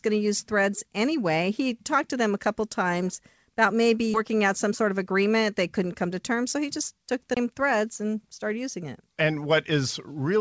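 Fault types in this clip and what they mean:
skip ahead: Around 4.14 s the audio leaps forward with no gap, losing roughly 0.4 s, because a stretch was dropped while later audio already waited.
jitter buffer speed-up: From 4.71 to 5.38 s the sound runs about 6% fast at unchanged pitch, as roughly 50 ms of pitch periods were trimmed to cut buffered delay.
CD skip: At 7.34 s a roughly 20 ms mute precedes a jump to another spot, as the laser jumped to a different turn of the disc.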